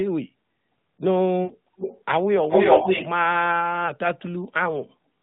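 From 1.44 to 1.52 s, lost AMR speech frames cut about 60 ms from the speech. The decoder repeats its last good settings at falling gain, so the sound smears and sags briefly.

From 1.77 to 2.04 s a delayed copy of the speech appears, about 304 ms behind and a little quieter than it. This is an echo leak. The likely cause is a loudspeaker echo canceller letting some of the sound through. From 2.43 to 3.11 s it returns louder than the speech itself.

At 3.86 s a single 20 ms frame is lost, causing a brief dip or warble.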